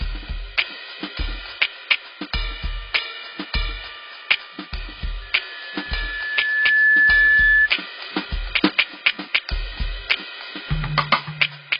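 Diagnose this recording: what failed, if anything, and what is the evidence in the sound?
The whole track sounds dull and smeared, with nothing at all above 5.4 kHz and a warbly, fizzy texture on the sustained parts. That points to the codec stage, most likely heavy AAC compression. At a very low bitrate, around 16 kbps, the encoder drops the top of the spectrum and quantises what remains so coarsely that the remaining bands smear together and swirl rather than holding steady.

From 5.22 s to 7.71 s there's a clear loudspeaker feedback squeal. A single tone at 1.7 kHz swells up over roughly a second and a half and ends up sitting about 10 dB above the music. That's an acoustic loop at the playback end: a mic is hearing the speaker it feeds, and at that one frequency the loop gain tips past unity, so the tone keeps feeding itself until the loop gets broken.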